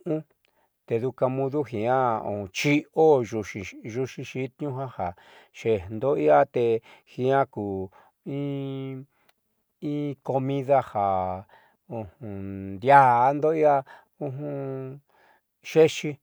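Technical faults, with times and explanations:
No technical faults can be heard in this speech recording, and the signal holds steady from its first moment to its last with no interruptions, level jumps or added noise.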